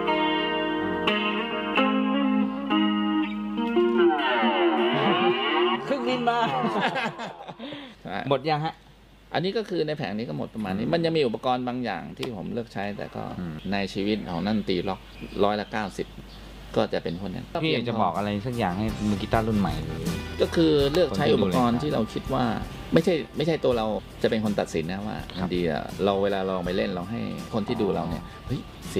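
No technical faults are audible anywhere in the recording.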